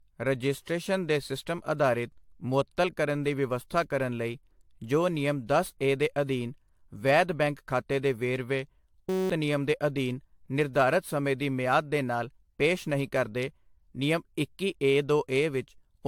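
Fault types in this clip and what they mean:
Generation loss: The speech sounds swirly and hollow throughout, with consonant attacks smeared, and nothing reaches above 19.2 kHz. That is more damage than a single AAC-LC pass at 96 kbit/s should leave. The likely cause is repeated decoding and re-encoding, around seven passes, with each pass requantising on a shifted frame grid so that noise and spectral gaps pile up.
System hang loop: Right after "ਬੈਂਕ ਖਾਤੇ ਦੇ ਵੇਰਵੇ" the speech turns into a steady buzz at about 188 Hz from 9.09 to 9.30 s, then resumes at "ਨਿਯਮ ਦੇ ਅਧੀਨ ਨਿਰਧਾਰਤ". The system froze while the playback hardware kept cycling one 5.33 ms slice of its buffer, 38 repeats in all, which fits a 256-sample buffer. Around 200 ms of real audio is lost under the buzz.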